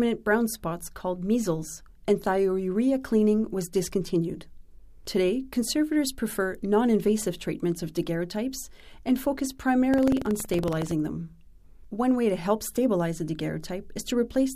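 From 9.89 to 10.94 s, buffer tearing makes a rattling 21.5 Hz buzz. It fits a 2048-sample buffer re-reading a sliver of audio a tenth of a second old, visible as regular waveform splices and vertical spectrogram stripes.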